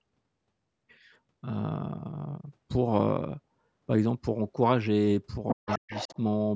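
From 5.48 s to 6.17 s a second, fainter voice runs underneath the speech, sitting roughly 10 dB below it. This is the other side's voice leaking through, likely because the far end was playing on a loudspeaker and the echo canceller left part of it in the microphone signal. On a spectrogram it shows as a weaker, separate set of harmonic stripes that don't line up with the main talker's, all kept below 8 kHz by the call's microphone processing. The waveform shows that extra energy filling the gaps between syllables.

Starting at 5.54 s and lasting until 6.17 s, the main speech itself dips and breaks up in patches adding up to about four tenths of a second, falling by as much as around 40 dB at its deepest. That is speech suppressed in double talk, likely because the canceller, faced with both sides at once, turned everything down. The waveform envelope shows sudden troughs, and the spectrogram shows matching vertical gaps.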